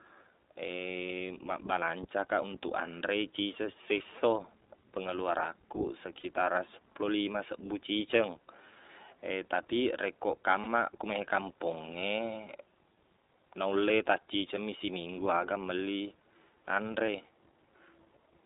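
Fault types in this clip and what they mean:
iLBC codec: narrowband VoIP coding at a rate that fits about 15 kbps, cutting this speech to roughly 250 Hz–3.7 kHz with a plainly rough, synthetic edge, unlike smooth low-pass bandlimiting.
Lost iLBC frames: 20–40 ms gaps, as after "anre ciceng sesso pengeluarankuq", filled by a held buzzy pitch cycle rather than silence, with speech resuming immediately.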